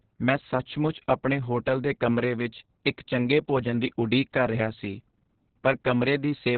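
Speech throughout, with heavy Opus voice compression: nothing above about 4.5 kHz, so it's narrowband and muffled, and the coarse SILK-style excitation makes it hoarse and a bit robotic. That degree of damage fits a very low bitrate, roughly 6 kbps.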